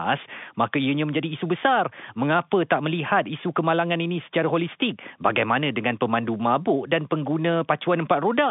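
No faults detected; the speech sits on a G.711 mu-law telephone line at 64 kbps, band-limited to roughly 150 Hz–3.6 kHz with nothing above 3.8 kHz, and the coding leaves at most faint traces.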